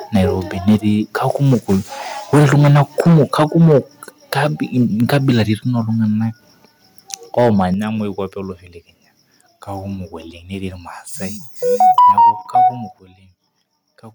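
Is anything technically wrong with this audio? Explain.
Yes. Harsh, crackling distortion hits the loudest speech at 0.15–0.25, 0.68–0.76, 1.3–1.75, 2.33–3.79, 4.32–4.47, 4.8–5.42, 7.13–7.64 and 11.98–12.18 s. This is likely microphone overload: peaks run up to about 11 dB past the converter's limit and get flattened.

Sudden drops in level, of about 2 dB at 0.69 and 3.72 s, 5 dB at 7.74 s, 3 dB at 11.99 s and 9 dB at 12.99 s, likely come from the microphone volume being stepped down after clipping.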